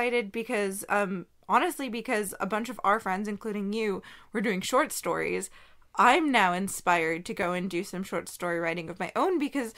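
At 2.29 s and 7.43 s, a block of digital silence (5.3 ms, then 2.7 ms) fits late-filled 256- and 128-sample buffers, heard as ticks, seen as flat gaps and broadband spectrogram streaks.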